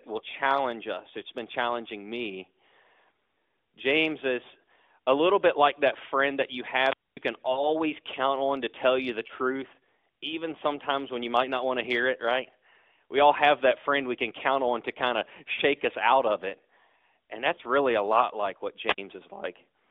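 Speech heard over a narrowband mobile line, with nothing above about 3.6 kHz and the light buzz of AMR-NB at what sounds like its 12.2 kbps mode. Two wireless microphone squelch dropouts occur. From 6.80 to 7.17 s hiss swells, then the sound drops to near silence for about 240 ms before returening, and a shorter hole of about 55 ms appears at 18.85 to 18.98 s. In each case the analogue FM radio signal weakened until the receiver's squelch muted it. Lost AMR speech frames cause the brief smeared, fading warbles at 7.52 to 7.72 s, 9.28 to 9.32 s and 17.56 to 17.61 s. The first gap fits about 40 ms of missing frames and the others about 20 ms each, which the decoder covered by repeating the last good settings at falling gain.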